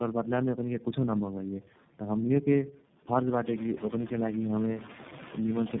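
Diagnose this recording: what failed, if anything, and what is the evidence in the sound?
Codec stage: tandem speech coding throughout. The speech sounds rough, muffled and warbly, with nothing above 3.7 kHz. This fits three low-rate speech codecs in series, such as G.729A twice and then iLBC, joined by G.711 links. Each coder re-encodes the previous coder's decoded errors, so the damage compounds.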